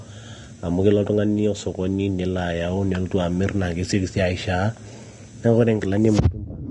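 Throughout the speech the treble sounds hissy and grainy, with nothing above 10.6 kHz, likely Vorbis compression at a low bitrate, perhaps around 35 kbps.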